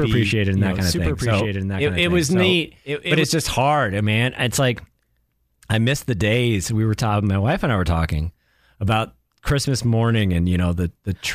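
Speech, with a doubled audio track already running from the start until 3.24 s, just before "just hard man". A second full-band copy trails by roughly a second, a few dB quieter, dry and cutting off abruptly, likely from a slower second capture path.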